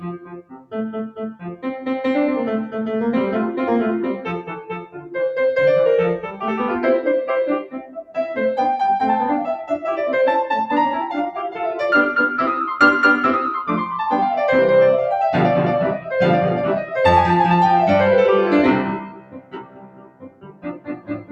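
This music pumps and thins throughout, its level swinging by around 10 dB, because a noise suppressor built for speech is treating sustained tones and reverb as noise. The sound is cut by the noise suppressor at 0.0–0.73 s (about 18 dB down), 1.34–1.64 s (about 14 dB), 4.42–5.15 s (about 15 dB), 6.27–6.42 s (about 7 dB), 7.63–8.17 s (about 17 dB) and from 18.97 s to the end (about 18 dB), where held sound sinks and tails are cut short.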